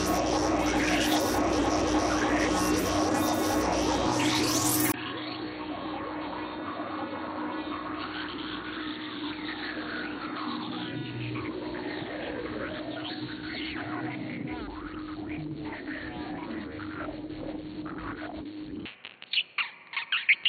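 At 4.92 s there's a brief dropout, then the sound goes dull, drops about 10 dB, loses everything above 4.4 kHz and picks up new background noise. Likely the input switched to a poorer device.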